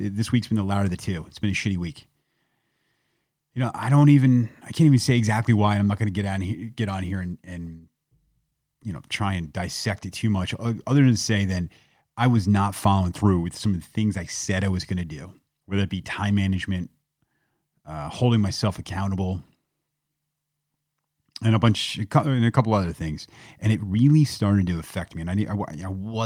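Throughout the speech, there is clock drift between sender and receiver. The sending device's audio clock runs around 4 percent fast relative to the receiving end, so samples arrive quicker than they are played out and the jitter buffer keeps filling. To avoid overflowing, the receiver has to discard small slices of audio again and again. The result is a faint, recurring unevenness in timing that never settles, because the mismatch persists for the whole clip.

From 0.33 s to 26.02 s, that drift shows up as repeated timing corrections. To keep pace with the faster sender, the receiver trims short pieces of audio at irregular spacing. Every edit goes the same way, removing material, and together they amount to playback at about 104 percent speed. Each cut is tiny, so the effect is heard as occasional slight hiccups and a tempo that feels subtly rushed and unsteady.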